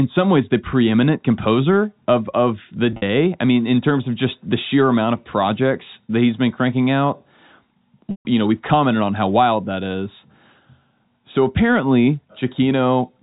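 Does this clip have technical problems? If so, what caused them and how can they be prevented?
Yes. At 2.92 s, right after "composer of of the" and before "I mean in terms", the sound briefly buzzes and holds, with about 80 ms missing over roughly 100 ms and the longest gap 50 ms. At 8.11 s a 140 ms dropout fades toward silence before cross-fading back. This is packet loss with pitch repetition: the receiver loops the last pitch period to cover the gaps in the G.711 A-law stream. A jitter buffer and forward error correction or redundancy on the network link would prevent it.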